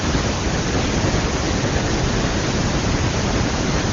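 Nothing's amiss here: it's a speech recording carried over AMR wideband (HD Voice) at 23.85 kbit/s, and no technical problem stands out anywhere in it.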